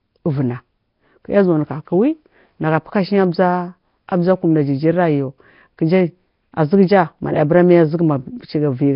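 Throughout, the speech has a rough, hissy halo, a smeared underwater quality and nothing above 5.3 kHz, likely from heavy Nellymoser compression at about 22 kbps.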